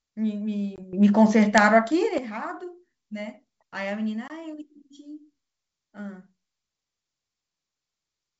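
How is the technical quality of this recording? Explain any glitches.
The recording has two short dropouts and a stretch of sudden level change, all carried over a G.722 wideband telephone link whose faint upper-band hiss fits the 64 kbit/s mode.

Packet loss on an ADPCM call occurs at 0.76–0.82 s and again at 4.28–4.31 s. Each time about 20 ms of audio, roughly one packet, went missing and was filled with silence, leaving a hard-edged gap. Because the decoder's adaptive predictor and step size lost track of the sender's, the speech comes back with brief distortion before settling.

A sudden gain jump runs from 0.93 s to 2.18 s. The speech and the background noise leap together by about 12 dB with no fade, so the change lands abruptly and drops back just as abruptly. The likely cause is a digital gain setting or bit shift applied instantly, sample to sample, rather than being ramped in and out smoothly.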